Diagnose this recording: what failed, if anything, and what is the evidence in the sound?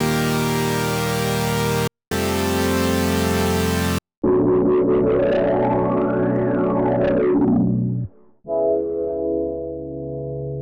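Hard clipping failed at the gain stage feeding the converter or sample-format conversion. At 6.36 s a single peak crackles briefly, with overdrive of about 0 dB, just touching full scale. From 7.41 to 7.56 s the overload is about 1 dB, and the loudest moments carry a brittle edge. The peaks are cut flat, and those squared tops add high harmonics. Soft saturation would round them with a warmer, gradual thickening instead of an abrupt crackle.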